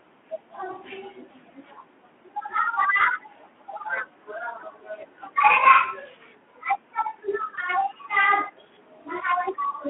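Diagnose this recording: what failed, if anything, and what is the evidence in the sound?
The failure is in the network stage: VoIP packet loss concealed by the speech codec. Two short gaps are patched over, at 2.97 to 3.05 s and at 7.55 to 7.59 s. Each sounds like a single missing 20 ms frame. The decoder fills the hole by repeating its last pitch and filter at falling gain. The result is a brief stretched, smeared blip. The damage outlasts the gap because each decoded frame builds on the one before. This all sits on the narrowband Speex line, which is audibly limited to about 200 Hz to 3.4 kHz.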